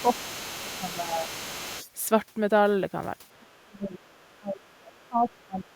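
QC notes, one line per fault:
0.0–1.9 s, 3.51–3.59 s and 5.67–5.76 s, other side's voice leaking through. A second voice sits under the talker. It is about 15 dB below the speech in the first stretch. The two later scraps are brief and faint, about 35 dB down. This is likely loudspeaker echo that the canceller left in the microphone signal. The echo path was not fully modelled, so residue passes through.
0.02–0.07 s, 0.65–1.28 s and 3.33–5.73 s, speech suppressed in double talk. The talker's level drops while the other side plays over the loudspeaker. The first two dips are short and about 10 dB deep. The last runs about 2 s in total and reaches about 25 dB. The likely cause is the canceller mistaking overlapping speech for echo and attenuating everything, so the near voice dips.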